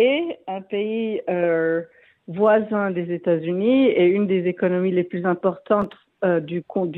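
From 5.82 to 6.20 s there is processor overload crackle: the processor repeatedly misses its deadlines for very short buffers, well under a millisecond each. Around ten are skipped outright, and the hard-edged gaps produce a gritty, tearing crackle that stops once the load clears.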